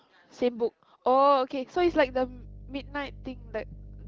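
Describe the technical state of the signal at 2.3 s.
A steady low 50 Hz drone sits roughly 20 dB under the speech: mains hum, running from 1.77 s to the end, leaking in from the power line through grounding.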